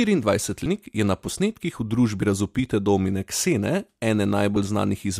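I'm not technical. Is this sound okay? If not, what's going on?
No. There are compressed frames skipped at 0.66 s and 2.22 s. The recording is stored in small chunks of about 32 ms each, and some chunks were missing or too damaged to play, so the speech jumps forward. At 0.66 s roughly five chunks vanish, losing about 150 ms of speech. At 2.22 s about one chunk, around 30 ms, is lost.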